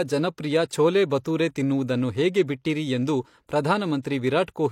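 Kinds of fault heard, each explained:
pre-echo: A hiss arrives before two sharp attacks in the speech, lasting 16 ms at 1.24 s and 24 ms from 4.02 to 4.04 s, leaving each onset smeared. The codec spread quantisation noise meant for the loud attack across its block, filling the quiet lead-in.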